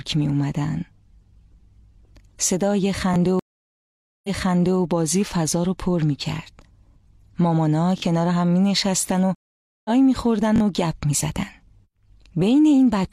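A repeated buffer at 3.14 to 3.16 s plays one piece of audio twice. The device replayed its last block, about 21 ms long, which fits a 1024-sample buffer, because fresh audio arrived late. The result is a short, hard-edged stutter. A stream reconnect follows at 3.39 to 4.80 s. The connection dropped, leaving 845 ms of silence, and a fresh decoder picks up 557 ms earlier than where playback stopped, so a stretch of sound is heard again. Repeated buffers return at 7.98 to 8.02 s and 10.56 to 10.60 s, each block sounding three times in a short stutter. Between them, a second reconnect at 9.35 to 9.90 s leaves 501 ms of silence and resumes roughly 0.4 s later, skipping that material.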